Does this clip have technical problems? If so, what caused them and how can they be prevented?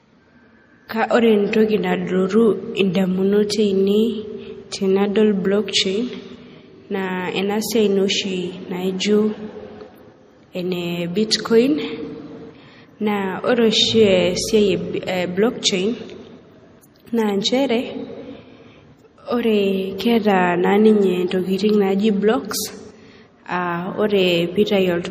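Yes. Throughout, the speech sounds watery and swirly, with nothing above 15.2 kHz. That's likely MP3 compression at a starved bitrate, fitting about 40 kbps, so the encoder cut treble and let weak detail flicker between frames. Encode at a higher bitrate, or keep a lossless master.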